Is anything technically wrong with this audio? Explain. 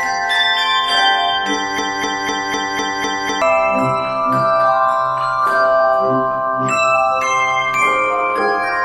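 Yes, there's a broken-record loop from 1.78 to 3.42 s. A roughly 0.25 s fragment repeats exactly, six times back to back, so the sound stutters mechanically. The likely cause is a stalled player or stream resending its last buffer, and the audio that should have filled that stretch is lost.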